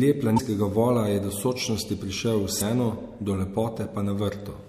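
At 0.36–0.40 s and 2.58–2.62 s, after "do sočnosti prišel v", damaged data in the compressed stream garbles decoded frames into short chirps, squawks, clicks or holes, seen as broadband spectrogram smears.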